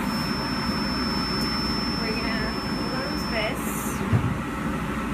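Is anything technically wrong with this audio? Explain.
Yes. From 0.0 to 3.58 s there is a feedback whistle: a thin, steady tone near 5.3 kHz, wavering slightly, roughly 10 dB below the sound. A speaker-to-microphone loop held just short of runaway is the likely cause.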